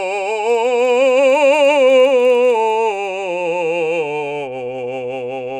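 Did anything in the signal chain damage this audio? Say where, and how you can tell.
Yes. In sample-rate conversion, a resampler restarted on every block (48 to 24 kHz) ticks evenly at 20 Hz, once per 50 ms block, from 0.4 to 3.1 s. Random dropouts would not be evenly spaced.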